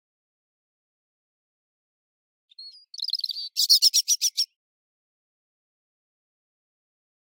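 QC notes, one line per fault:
No faults were found in this clip. Nothing in the audio calls for a QC entry.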